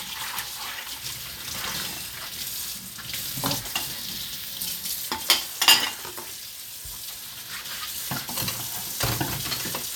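A recording of everyday sounds, with no technical faults to report. Nothing in the audio points to a problem at any moment.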